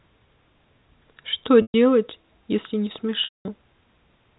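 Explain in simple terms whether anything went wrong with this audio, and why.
Packet loss with pitch repetition occurs at 1.62 s for 0.12 s and at 3.24 s for 0.21 s. Pieces of the speech never arrived, so the receiver repeated the last pitch cycle as a brief held buzz, then faded it toward silence until the speech returned.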